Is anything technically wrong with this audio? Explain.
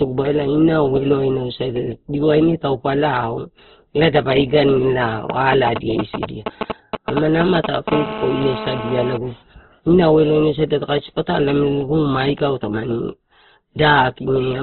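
Yes. Throughout, the speech sounds muffled, grainy and rough, with nothing above about 4.3 kHz. The likely cause is heavy Opus compression in its CELT music mode at a narrowband setting, which fits a rate around 12 kbps: bands short of bits get filled with noise, so tones turn coarse.

From 5.30 to 7.90 s, just after "elae dapa ida in", a galloping dit-dit-dit of short 217 Hz buzzes sits at roughly the same loudness as the speech. These are GSM signalling bursts: a nearby 2G phone sends brief groups of radio bursts that the audio circuit rectifies into sound.

From 7.92 to 9.17 s a steady, hard, raspy buzz at 217 Hz, full of harmonics, runs about 8 dB below the speech. This is GSM phone buzz: a nearby 2G phone in a call transmits 217 bursts per second, and the circuit demodulates them continuously.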